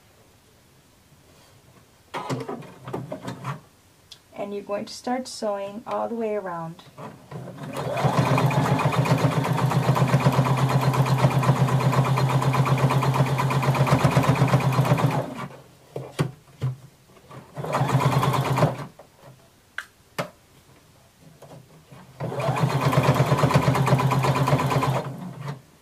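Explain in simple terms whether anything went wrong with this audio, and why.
Nothing went wrong with this audio, because no fault can be heard anywhere in it.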